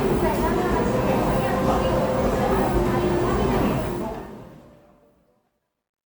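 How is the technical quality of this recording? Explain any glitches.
The fade-out at the end of this everyday sound recording degrades. Its tail turns gritty and grainy from 3.70 s, and from 4.88 s to 6.19 s it is at its worst. This is truncation distortion on a fade. The volume stage drops low-order bits without dither, which fits a 12-bit path. As the level sinks toward the smallest step, the waveform collapses into coarse square steps.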